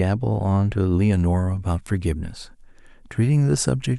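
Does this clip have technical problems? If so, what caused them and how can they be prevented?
Yes, there's pre-emphasis left on in this speech. From about 1.13 s to the end, the treble sits roughly 10 dB hot at 10 kHz relative to 1 kHz, which fits a 50 µs FM curve. The boost was applied but never undone, so the sound turns thin, bright and hissy on sibilants. To prevent it, make sure the matching de-emphasis is switched on at the receiving or playback end whenever the source applies pre-emphasis.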